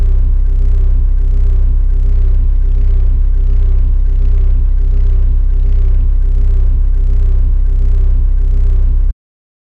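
From 2.11 to 6.11 s the treble abruptly vanishes above 7 kHz with no gap: an adaptive stream at a lower bitrate, switching from roughly 96 to 24 kbit/s after the connection slowed.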